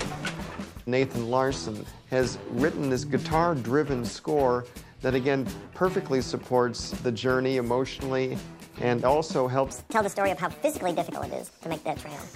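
A wrong sample rate fault runs from 9.71 s to the end at 12.35 s. In this stretch the samples are played out faster than they were captured, with no rate conversion. Everything runs at 1.5 times its proper speed, and the pitch rises by about 7 semitones, close to a perfect fifth. The sound turns noticeably higher and more hurried at once. A 1.5 ratio fits material recorded at 32 kHz being played back at 48 kHz.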